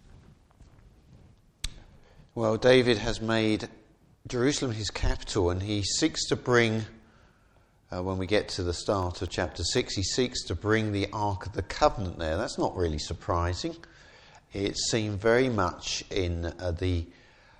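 From 6.78 to 9.78 s the audio has periodic USB or driver dropouts: about fifteen ticks, one every 0.25 s, each a gap of roughly a millisecond filled with silence. The strict spacing and the silent fill distinguish them from random clicks or network packet loss.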